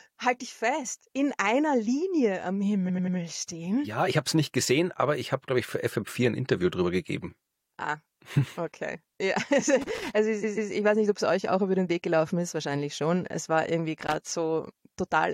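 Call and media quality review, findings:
Repeated frames, 2.88 to 3.16 s: stutter, a 92.9 ms block played three extra times, about 0.28 s added. Repeated frames, 10.43 to 10.71 s: a 139.3 ms block played twice more, again about 0.28 s added. The block lengths suggest roughly 23 ms codec frames, so the likely fault is in the packetiser or jitter buffer re-sending frames. Waveform shows identical segments copied back to back. Spectrogram shows repeating tiles.

Loose connector crackle at 9.81 to 10.10 s and 14.01 to 14.32 s: irregular bursts of crackle and scratch, each about 0.3 s long. Probable component is a worn or dirty jack or cable contact making and breaking as it moves, chopping the signal. Waveform shows ragged dropouts. Spectrogram shows scattered broadband vertical streaks with uneven spacing.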